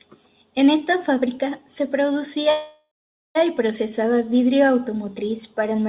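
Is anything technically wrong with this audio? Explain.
Yes, there's a call audio freeze from about 2.5 to 3.37 s. Packets were likely stuck in transit, so the jitter buffer ran dry and the receiver stretched the last bit of speech into a fading buzz, which drops to silence for roughly the last 460 ms of the gap. When the packets show up, the speech resumes right where it stopped, so nothing's lost, but everything after is pushed about 850 ms later. The 4 kHz ceiling you hear throughout is just the G.711 call codec working normally.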